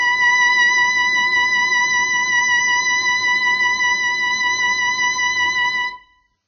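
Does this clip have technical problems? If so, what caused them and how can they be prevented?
Yes. Throughout the music, the audio was likely squeezed through heavy Vorbis compression at a very low bitrate, around 15 kbps. At that rate the encoder spends almost nothing on the residue above its spectral floor, so nothing survives above 6.2 kHz, and the remaining treble is quantised so coarsely that its detail turns into noise of similar energy. The result is a dull, hissy, grainy sound with roughened tones and smeared attacks. To prevent it, encode at a much higher Vorbis quality setting or keep a lossless copy for distribution.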